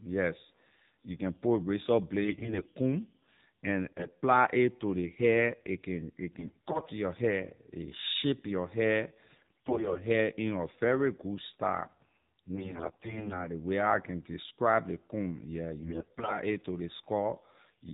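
Throughout, the speech carries AMR narrowband mobile codec damage at 7.4 kbps. Nothing above 4 kHz survives, and the pulse-driven vocal-tract model leaves a plainly buzzy, synthetic edge. That synthetic colouring is what separates it from a simple low-pass filter, which would only dull the sound.

AMR bit errors strike at 2.24–2.68 s (just before "comb and"), 3.86–4.15 s, 6.32–6.93 s, 9.28–9.99 s, 12.56–13.47 s (before "ley way how I") and 15.80–16.39 s (between "describe ley comb yeah" and "a to ley"). Corrupted low-priority bits misplace the excitation pulses and skew the finer parameters. Pitch and level hold, but the voice turns hoarse, scratchy and gargly. Unlike lost frames, there are no gaps, mutes or repeated sound.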